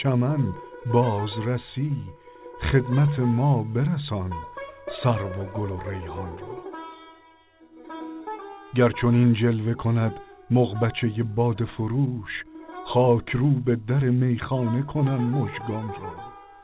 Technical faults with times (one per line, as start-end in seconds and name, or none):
none